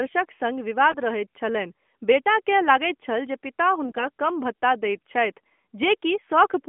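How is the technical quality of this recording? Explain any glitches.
The recording is narrowband mobile-phone speech, limited to roughly 200 Hz to 3.4 kHz and carried by the AMR narrowband codec in its 12.2 kbps mode. It has two brief glitches.

AMR bit errors occur at 0.90 to 0.97 s and again at 3.85 to 4.08 s. Flipped bits in the frames' weaker, unprotected fields scramble pulse positions and fine gain and spectral values. The voice keeps its pitch and loudness but turns hoarse and gargly. Dropped packets would instead cause gaps or smeared fill.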